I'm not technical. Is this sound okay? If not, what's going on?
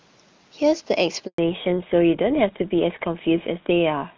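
No. At 1.26 s there's a handover gap: the call hopped between networks and the voice drops out for about 120 ms, until 1.38 s. Right after, there's a fallback to narrowband. The call leaves HD Voice for an older phone codec, so from 1.38 s to the end everything above 4 kHz disappears and the voice sounds duller and muffled.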